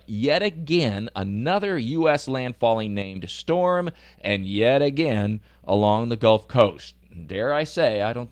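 A sudden gain jump occurs in this speech recording between 3.02 and 3.16 s, just before "storm and yet again". The level drops by about 7 dB in a single step, and the background noise falls together with the voice, which places the change in the digital chain rather than at the source. The likely cause is a gain setting applied instantly, with no ramp to ease the transition. The Opus voice compression adds only light coding damage.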